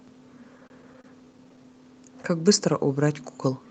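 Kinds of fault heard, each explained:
Repeated stalls (stutter): between 0.57 and 1.74 s the speech drags in a rapid run of brief hitches, each under 30 ms, with nothing lost. Late packets kept emptying the jitter buffer while the receiver stretched the last sound.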